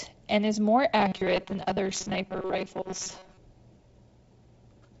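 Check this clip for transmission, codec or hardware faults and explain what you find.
One transmission fault appears, a robotic sound from repeated short buffers, between 1.00 and 3.37 s of the speech. Audio likely reached the playback side too seldom, so the software filled each gap by looping the last fragment, about 5.3 ms long, while the missed audio was dropped. Roughly half the sound in that stretch is repetition. The looping imposes a fixed 188 Hz buzz, turning the voice metallic while still loosely tracking the words. The G.722 wideband coding at 56 kbit/s contributes only light damage, a light hiss and a slightly noisier lower band, with nothing above 7.7 kHz.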